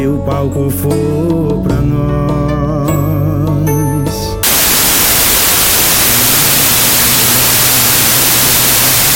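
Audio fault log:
4.43–9.15 s, wrong sample width: from this point to the end, 32-bit integer samples are read back as packed 24-bit integers, so each value is built from three bytes that straddle the original four-byte boundaries. Only some values keep the real signal's top bits, so loud noise covers the sound, which stays faintly audible underneath. Splitting every four bytes into three-byte samples yields extra samples, so playback runs at 0.75 times speed with pitch lowered by the same ratio.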